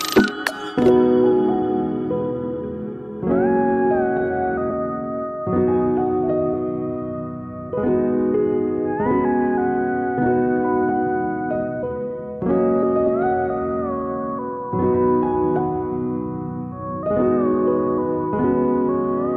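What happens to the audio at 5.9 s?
Nothing goes wrong at 5.9 s; the audio plays through that moment intact, with no dropout, click or distortion.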